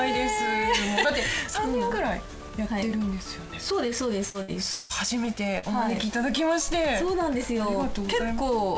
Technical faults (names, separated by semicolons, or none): short concealed packet loss; repeated packet loss (robotic sound)